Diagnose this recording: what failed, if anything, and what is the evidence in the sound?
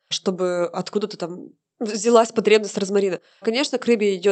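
Nothing failed here; the speech arrives intact.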